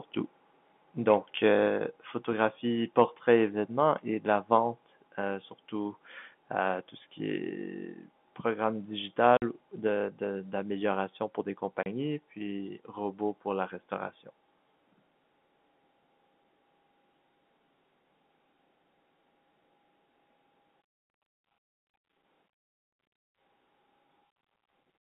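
A telephone-band speech recording, carried over what sounds like G.711 mu-law coding with content confined to roughly 150 Hz to 3.5 kHz, with three kinds of fault. At 1.68 s the microphone volume is stepped down: voice and background fall together by about 3 dB in a single instant rather than fading, which is the signature of the call software cutting the device's input gain in one move. The likely cause is that the software judged the input too hot or clipping and reacted by pulling the level down. Shortly after, from 2.98 to 3.03 s, there is microphone overload. The loudest peaks in that span push about 2 dB past the converter's limit and have their tops flattened, and a small fraction of samples is clipped. That produces a brief harsh, crackly edge on the loudest syllables, consistent with input volume set too high for the converter. The third fault is packet loss filled with silence, at two points. 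From 9.37 to 9.42 s the audio drops out for 50 ms, and from 11.83 to 11.86 s for 30 ms. Both gaps are hard-edged because the receiver inserted plain silence instead of concealing the loss. The gap lengths are clean multiples of 10 ms, which fits lost packets of that duration.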